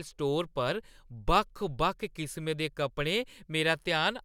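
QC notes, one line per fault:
No faults heard on this speech pass; nothing to log.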